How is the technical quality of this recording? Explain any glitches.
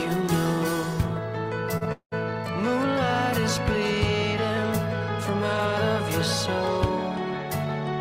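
Two timing glitches sit close together near the two-second mark, both coming from audio arriving late rather than being lost.

From 1.77 to 1.83 s there is a short stall from a late packet. The receiver ran out of buffered audio and stretched the last sound for about 36 ms until the packet turned up, then carried on from the same point. Nothing is skipped, but that moment is held slightly too long with a faint buzz or dip, and everything afterwards runs 36 ms behind.

From 1.92 to 2.14 s comes a call audio freeze, likely caused by packets held up in transit that emptied the jitter buffer. The gap is far longer than the stall: the last sound is continued as a fading buzz or hiss that drops into about 80 ms of silence before playback resumes where it stopped. Roughly 196 ms is inserted with nothing lost, so the following audio is delayed by that amount. The audible drop to silence is what marks this as a freeze rather than another brief stall.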